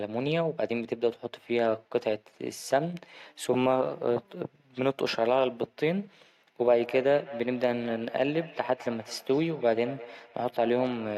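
Feedback echo between two devices starts at 6.76 s and runs to the end at 11.18 s. Two devices in the same room are on the call, and one replays what the other's microphone captured. That microphone hears it again, and neither echo canceller removes sound played by the other device. The speech returns roughly a fifth of a second later, thinner and more ringing, with the echo peaking at about 15 dB below the speech.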